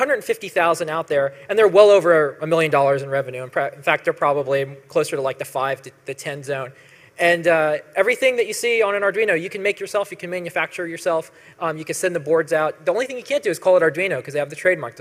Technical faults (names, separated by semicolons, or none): none